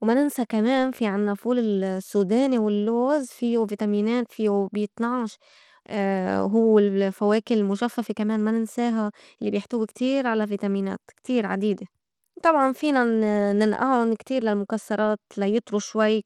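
Throughout the speech, the treble is cut off at 17.2 kHz, and a plainly audible gritty coding noise rides on the sound. This is likely Bluetooth SBC compression at a low rate, consistent with roughly 96 kbps, where the upper sub-bands are starved of bits and the rest are coarsely quantised.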